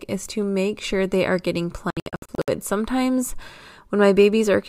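A digital broadcast dropout runs from 1.90 to 2.48 s, just after "sure they are getting": the receiver muted whenever frames failed, leaving several short silent holes totalling 352 ms across 576 ms, the longest 64 ms, consistent with eleven lost frames, before the speech returns.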